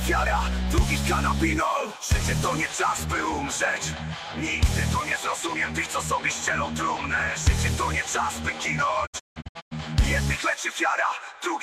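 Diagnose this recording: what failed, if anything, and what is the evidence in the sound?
A digital broadcast dropout at the reception and decoding stage breaks up the audio from 9.05 to 9.73 s. Across those 640 ms the sound mutes in several short holes totalling about 416 ms, the longest 160 ms, each entered and left through a quick 20 ms fade. The gaps fit whole decoded frames of about 32 ms being discarded after failing their checks. The mutes are silent, not smeared or repeated the way concealment or a stuck buffer would be, and the material lost in them never returns.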